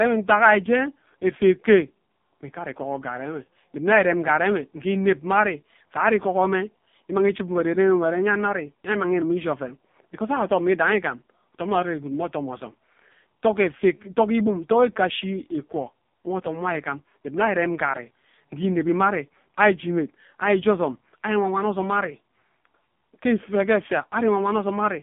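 From start to finish the speech carries the sound of the AMR narrowband mobile codec: nothing passes above 3.6 kHz or below about 150 Hz, and heavy buzzy, synthetic coloration points to a low mode near 5.15 kbps, unlike a plain band-limited line, which stays clean.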